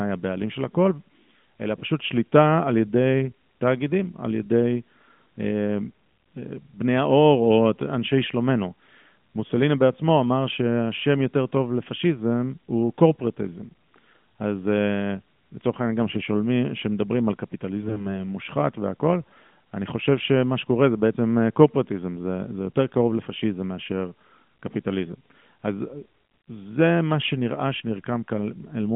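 From 17.82 to 18.06 s the speech turns hoarse and gargly at steady pitch and level. These are AMR bit errors: flipped low-priority bits misplace excitation pulses in four frames within that span.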